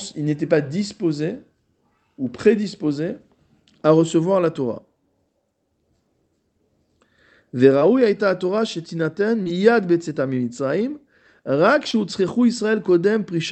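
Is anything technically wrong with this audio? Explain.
Yes. Short concealed packet loss occurs at 7.79–7.83 s, 9.43–9.52 s and 11.91–11.95 s. Each gap fits one lost 20 ms packet. The decoder bridged it by extending the preceding sound, then blended back, leaving a brief smear or wobble.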